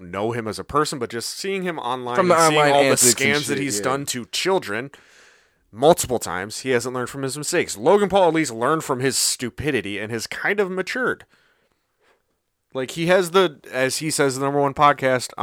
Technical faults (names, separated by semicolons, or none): none